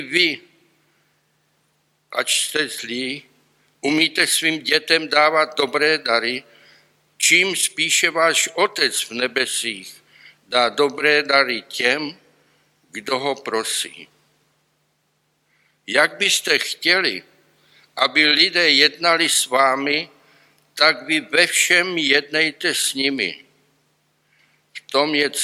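Nothing here trips me up; there's no technical fault to point to anywhere in the audio.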